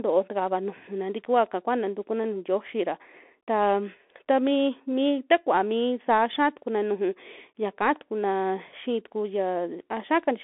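From start to end, the speech carries the sound of a Bluetooth CVSD headset codec. The band runs from 250 Hz to 3.5 kHz, with nothing above 3.8 kHz. Single up-or-down steps at 64 kbit/s lag sharp changes. S sounds turn scratchy, and a granular hiss sits underneath.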